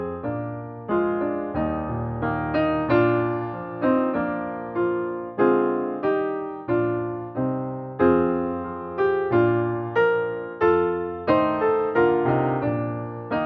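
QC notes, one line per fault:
No faults heard.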